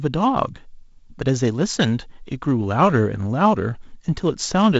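No technical faults occur anywhere in this speech, which comes through G.722 wideband telephone coding at 48 kbit/s with nothing above about 7.7 kHz.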